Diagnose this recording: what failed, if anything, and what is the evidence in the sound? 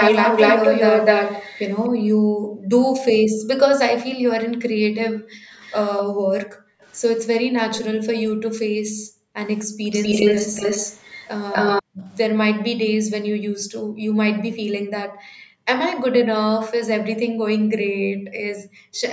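Echo leak in the call processing: at 0.0–1.73 s, 5.61–6.92 s and 9.59–11.83 s the speech repeats 252 ms later. The first copy is louder than the original, the second about 20 dB down, the third about level with it. A spectrogram shows syllables doubled, likely because a speakerphone's canceller passed its own pickup back.

Background gated by the echo canceller: the room tone drops by up to about 40 dB at 1.93–6.81 s, 8.32–9.83 s, 11.83–15.67 s and 17.28–19.01 s, for one to two seconds of each stretch. On the waveform the noise floor collapses to near silence, then snaps back when the suppression releases.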